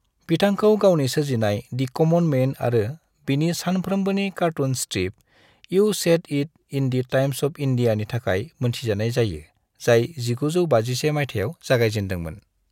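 Nothing here calls for comment; the speech runs along without a single technical hiccup to point to anywhere in the recording.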